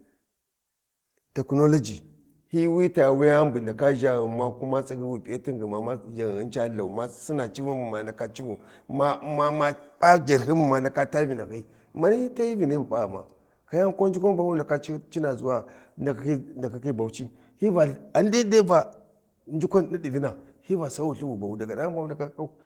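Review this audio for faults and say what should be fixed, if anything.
Nothing to fix: the speech runs through Opus voice compression at full bandwidth, and its light coding texture fits a hybrid stream at around 20 kbps.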